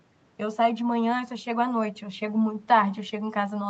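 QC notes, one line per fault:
Nothing stood out on listening to the speech.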